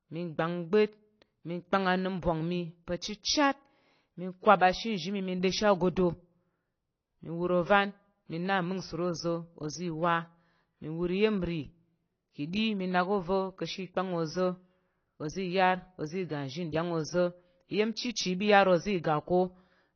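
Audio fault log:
throughout, AAC compression: the speech was likely run through an AAC-LC encoder at a low bitrate, consistent with about 24 kbps. Too few bits forced a 6.6 kHz cut-off, so it sounds dull and muffled, with plainly audible smearing and fizzy, warbling sibilants.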